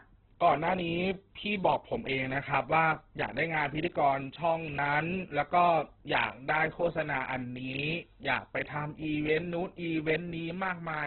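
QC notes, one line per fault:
Throughout, Opus compression: the speech has nothing above about 4.1 kHz and heavy codec damage, sounding rough, grainy and noise-filled rather than swirly. It is likely an Opus encoder at a very low bitrate, around 8 kbps, in its music (CELT) mode squeezed to narrowband, where starved bands are filled with noise or folded copies of lower ones. Unlike MP3, the spectrum has few watery holes, and the graininess sets it apart from a plain low-pass filter.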